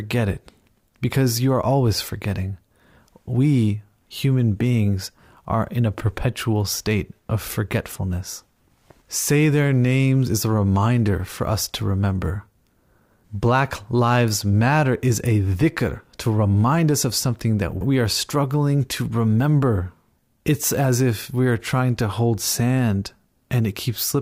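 No technical faults can be heard anywhere in it.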